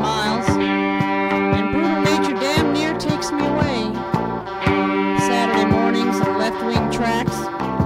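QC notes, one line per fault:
Nothing stood out on listening to this music.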